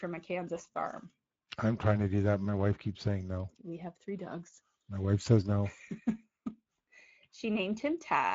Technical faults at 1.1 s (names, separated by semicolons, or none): Speex codec